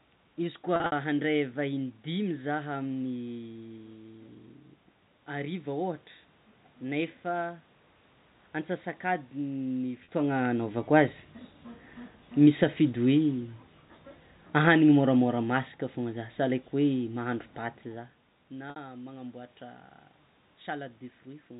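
Packet loss with pitch repetition hits at 0.76 to 0.92 s, 10.04 to 10.08 s and 18.70 to 18.76 s. The receiver bridges each gap (120 ms scattered over 160 ms, then 40 ms, then 60 ms) by repeating the last pitch period, so the speech briefly holds on a buzzy, sustained tone.

Between 14.48 and 17.11 s, the automatic gain is falling: the control judges the input too loud or its background noise too strong and lowers its gain by about 3 dB, so the speech and the room noise behind it sink together.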